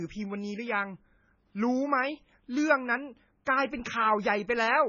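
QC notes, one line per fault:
Throughout, MP3 compression: the speech sounds watery and swirly, with a metallic, chirping edge on s sounds and blurred consonant onsets, and nothing is left above 7 kHz, so the top end sounds dull and boxed in. The likely cause is heavy MP3 encoding at a very low bitrate, consistent with about 16 kbps. Short of bits, the encoder removes all treble above a fixed cutoff and drops weak frequency lines, which flicker on and off from frame to frame and produce the swirl.
3.45 s, pre-echo: a brief hiss comes just before a sharp onset, about 17 ms early, and the attack itself sounds softened and smeared rather than crisp. The codec spreads its quantisation noise evenly across each transform block. This attack falls late in its block, so noise sized for the loud part also fills the quiet instant before it, where nothing masks it, and it is heard as a lead-in hiss.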